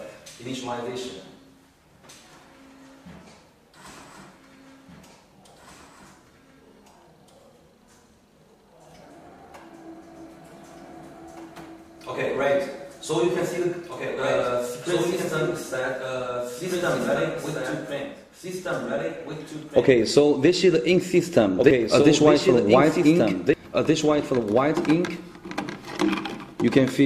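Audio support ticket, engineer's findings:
Doubled audio track, whole clip: full-band second copy trailing about two seconds behind, roughly 5 dB down. Not room echo or reverb: single repeat, no decay tail, no room colour. Likely a second capture via slower path or misaligned edit.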